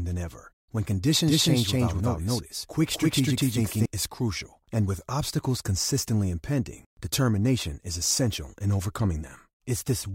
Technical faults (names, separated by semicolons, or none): doubled audio track